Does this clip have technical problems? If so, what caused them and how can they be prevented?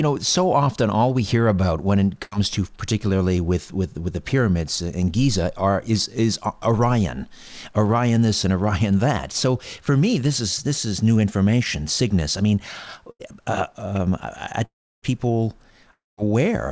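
Yes. Burst of packet loss at 2.24 to 2.33 s and again at 13.11 to 13.21 s: about 80 ms of audio never arrived over this G.722 call path. The receiver stretched the last sound into a short fading buzz or hiss, then resumed further on with that stretch missing. Prevention: enable forward error correction or redundancy in the codec settings and give the jitter buffer a little more headroom.

Long network dropout at 14.65 to 15.04 s and 15.92 to 16.19 s, likely from the connection briefly stalling: about 380 ms and 260 ms of audio are lost. Each starts as a fading buzz or hiss and then falls to silence before the audio returns further on. Prevention: use a steadier network, such as wired rather than congested Wi-Fi, and reserve bandwidth for the call.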